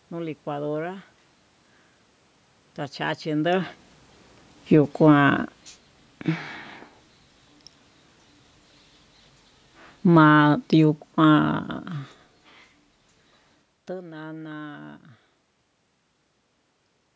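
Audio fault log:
10.02–11.87 s, automatic gain falling: the speech and its room background sink together by about 5 dB over nearly two seconds. The call's automatic gain control judged the input too loud and eased its gain down gradually, lowering everything it passed at once.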